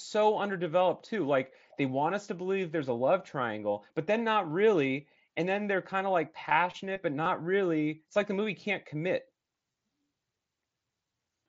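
At 7.24 to 7.26 s, after "of like passionate but", and at 9.72 to 9.74 s, after "the movie can't commit", concealed Bluetooth headset packet loss fills gaps of about 22.5 ms, which fits three lost frames each, by repeating the best-matching recent waveform. Each sounds like a brief buzzy tone held at full level, with a small warble as real audio returns. A waveform shows a repeated cycle. A spectrogram shows even harmonic lines below the mSBC link's 8 kHz ceiling.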